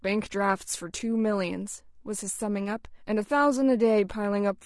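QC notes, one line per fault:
Throughout, low-delay AAC compression: the speech was likely coded with a low-delay AAC codec at a bitrate that fits about 32 kbps. Its short frames resolve pitch harmonics poorly, so the voice is plainly rough and grainy, with noise between harmonics and a lowered or synthetic top band.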